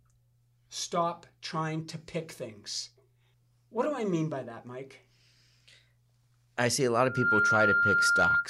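Loudspeaker feedback squeal runs from 6.98 to 8.48 s. The microphone picks up its own loudspeaker, and at 1.4 kHz the loop gain exceeds one, so a steady tone swells within roughly a third of a second to about 5 dB above the speech.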